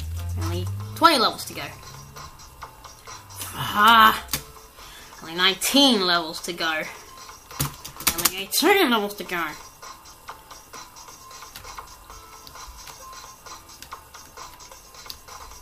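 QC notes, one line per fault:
No faults found.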